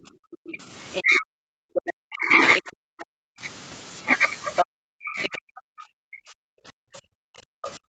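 From 0 to 3.42 s the speech is suppressed in double talk, most likely because the echo canceller could not separate the talker from loudspeaker echo while both sides spoke, and turned everything down. For around three seconds the voice dips and breaks, at worst by about 40 dB. The waveform shows the envelope collapsing into gaps, and the spectrogram shows the harmonics fading or vanishing in patches.

Within that stretch, the other side's voice leaks through, in bursts at 0.92–1.03 s (about 10 dB below the speech), 1.74–1.93 s (about 5 dB below) and 2.55–3.04 s (about 10 dB below). These are likely scraps of residual echo. On the spectrogram they appear as short, unrelated harmonic patches sitting under or between the talker's energy.

At 4.56–4.66 s a leak arrives roughly level with the speech. From 4.65 s to the end, suppression in double talk returns, again dropping the voice by up to about 40 dB, with the same ragged holes in the waveform.

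Fainter leaks, about 15 dB down, follow at 5.23–5.28 s and 7.62–7.71 s and appear as faint smudges of foreign harmonics.

Throughout, the spectrum stops at 8 kHz, as expected from the Opus call path.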